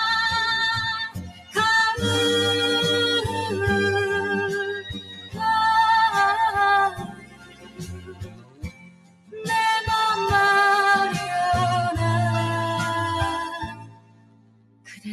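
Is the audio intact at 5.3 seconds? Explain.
No. From 4.74 to 5.42 s, a span of about 0.7 s that covers 5.3 s, the sound is cut by the noise suppressor. The suppressor treated this passage as noise and pulled it down harder than what surrounds it, by about 15 dB at its deepest. The steadier, sustained parts sink and their decay is cut short, while sharp onsets come through. That separates it from a dropout, where everything, onsets included, would go silent.

This local cut sits on top of a noise suppressor applied to music or sounds, which is active across the whole clip, 5.3 s included. Built for speech, it mistakes held tones, ambience and reverb for noise and turns them down, with a gain swing of around 20 dB. Attacks survive while sustains and tails sink, so the sound pumps and thins. Unlike the 4.74 to 5.42 s event, this one runs throughout the clip.

A channel delay causing comb filtering is also present at 5.3 s, as it is throughout. 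One channel runs late by roughly 10 ms, and when the two are summed to mono, whatever they share cancels at evenly spaced frequencies. The first notch falls near 50 Hz, with further notches about every 100 Hz above it. The result is a hollow, phasey colour. It is distinct from the suppressor faults because it does not vary in level; the notches stay fixed in frequency however loud or quiet the sound gets.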